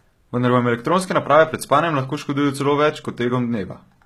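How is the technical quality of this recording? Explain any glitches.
The recording has one clear fault, present throughout the speech: HE-AAC compression is the likely cause. Nothing reaches above 14.9 kHz. The codec encodes only the lower spectrum and rebuilds the treble by copying lower bands upward. Those synthetic highs don't match the true harmonics, so s sounds turn gritty and lispy. The damage is plainly audible, which points to a very low bitrate of around 20 kbps.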